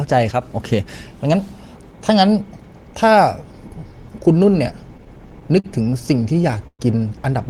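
From 0.31 to 0.42 s, a sudden gain jump, likely a digital gain change applied without a ramp, drops speech and background together by about 6 dB. From 4.97 to 6.81 s, packets arrive late and the jitter buffer keeps running empty, causing repeated stalls (stutter). The receiver stretches the last sound through each gap, up to 118 ms long and about 316 ms in total, so the speech drags and stutters with nothing lost.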